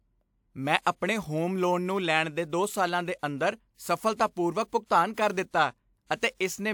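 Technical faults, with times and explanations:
0.81–0.86 s, 4.86–4.91 s and 5.14–5.17 s, pre-echo: a short hiss rises just ahead of the onsets of "ਆਪਣੇ ਹੋਮ ਲੋਨ ਨੂੰ" and, twice, "ਕਰ ਦਿੱਤਾ", spreading about 52, 49 and 37 ms early. The codec sized its noise for the loud attack and spread it across the whole transform block, so the quiet gap before each onset fills with noise and the attack sounds softened. Unlike reverb or echo, which trail after a sound, this noise arrives before the event it belongs to.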